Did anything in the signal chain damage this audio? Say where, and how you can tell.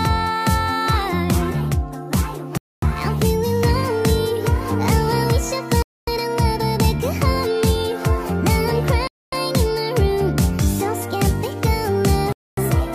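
Yes, a gap between chunks at playback or storage: hard-edged 250 ms silences at 2.57, 5.82, 9.07 and 12.32 s between 3 s chunks. Unlike dropouts, no sound is lost.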